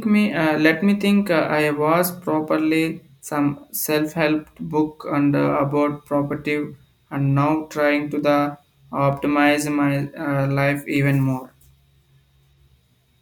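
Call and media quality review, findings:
Four sharp single clicks in the speech at 8.19, 9.13, 10.02 and 10.96 s, roughly a second apart. Likely dropped samples: a handful lost each time, well under a millisecond, so the waveform jumps and snaps. Nothing audibly missing, just the ticks.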